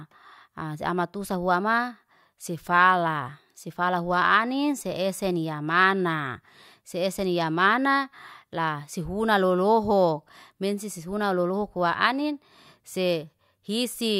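Nothing stood out on listening to this speech recording.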